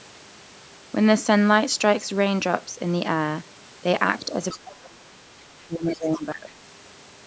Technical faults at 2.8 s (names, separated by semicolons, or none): none